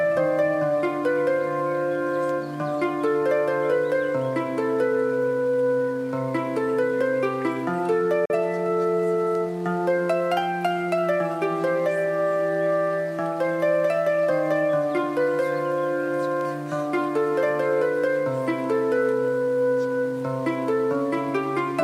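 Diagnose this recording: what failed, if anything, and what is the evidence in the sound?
Digital broadcast dropout at reception: a 3 ms fade to silence from 8.25 to 8.35 s, a flat waveform gap and blank spectrogram band, fitting one failed frame.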